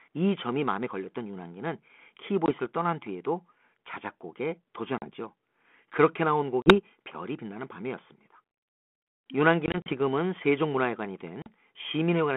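Packet loss on an ADPCM call cuts hard-edged silent holes of 20 to 80 ms at 2.46, 4.98, 6.62, 9.66 (scattered over about 0.2 s) and 11.42 s. The decoder's predictor and step size lose sync, so speech returns slightly distorted before settling.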